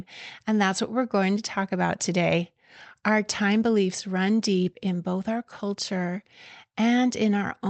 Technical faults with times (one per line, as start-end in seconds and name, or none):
none